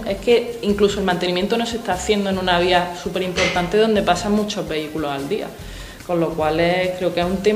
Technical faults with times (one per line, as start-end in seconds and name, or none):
none